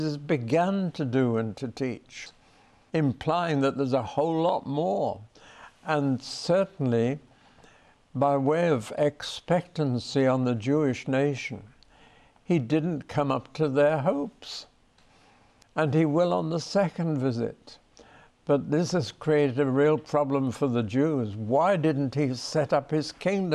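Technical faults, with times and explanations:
No technical faults, with times and explanations, to report.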